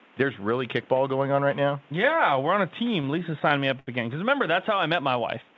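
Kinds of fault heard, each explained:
Repeated stalls (stutter): packets kept arriving late, so the jitter buffer ran dry ten times after "we're on a", each gap patched by stretching the last sound, making the audio drag and stutter.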